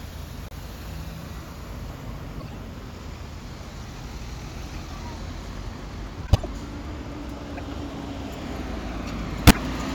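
Corrupt frame decoded occurs six times: 0.42–0.53 s, 2.40–2.54 s, a brief blip at 4.74 s, 6.27–6.46 s, 7.57–7.60 s and 9.47–9.59 s. Damaged compressed frames were played as if valid, so misread gains and codes put energy at the wrong frequencies, heard as chirps or noise bursts. Each spans a few frames; most peak near about -25 to -30 dBFS, but those at 6.27 s and 9.47 s reach about -5 dBFS. A spectrogram shows short, frame-aligned blocks of misplaced energy; the waveform shows abrupt bursts.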